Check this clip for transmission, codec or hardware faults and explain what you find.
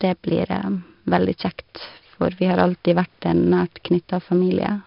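One codec fault runs through the whole speech clip: 4-bit ADPCM compression. Each sample is coded as a coarse 4-bit step from a prediction, so a gritty hiss rides on every loud syllable and sharp onsets crunch where the step size lags. Unlike steady background noise, this hiss rises and falls with the speech level. Nothing reaches above 5.3 kHz, which points to a low sample rate and about 44 kbps, and this dulls the sound further.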